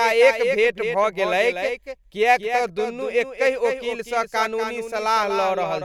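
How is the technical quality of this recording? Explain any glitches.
The recording has one clear problem: a doubled audio track runs through the whole clip. Every syllable of the speech is followed by a second copy about a fifth of a second later. That copy is only a few decibels quieter. It has the full bandwidth of the original and no decay or room tone, so it sounds like a stuttering duplicate rather than an echo. The likely cause is the same signal reaching the mix twice, once through a slower path.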